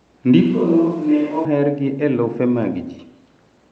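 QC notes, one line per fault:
0.42–1.45 s, switch to a distant microphone: for about a second the sound goes roomy and hollow, loses its low end and drops about 5 dB, with the room noise coming up to around 30 dB below the speech. It flips in and back abruptly, which most likely means the close mic dropped out and a far-off mic, such as a camera's, took over. That mic hears more of the room than of the source.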